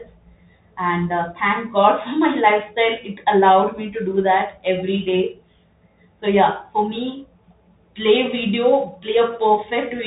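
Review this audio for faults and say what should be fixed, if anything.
The speech runs through a Bluetooth CVSD headset codec from start to finish. Nothing above about 3.8 kHz survives, so the top end is gone. The damage is plainly audible. CVSD sends one bit per sample, up or down, and adapts its step size, which fits a 64 kbps stream. Loud, fast rises outrun the step and distort. S sounds turn scratchy. A granular hiss sits under everything. Route the headset over a wideband profile such as mSBC, or record locally on the device, instead of using the CVSD link.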